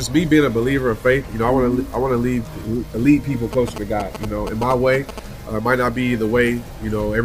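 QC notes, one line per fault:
3.53–5.20 s, GSM signalling bursts: a 2G phone close to the equipment transmitted short clusters of radio bursts while signalling to the network, and the audio circuitry rectified that RF into the signal path. The result is a galloping dit-dit-dit run of short buzzes pulsing at about 217 Hz, the frame rate of the bursts, sitting roughly 10 dB below the wanted audio for about 1.7 seconds.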